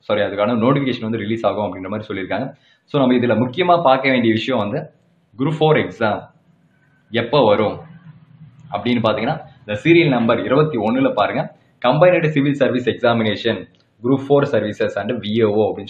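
No technical faults can be heard anywhere in the audio. Nothing in it points to a problem in recording, processing or playback.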